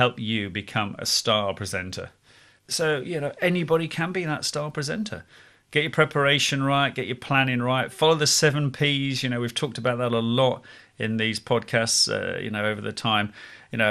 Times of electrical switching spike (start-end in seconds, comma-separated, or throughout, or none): none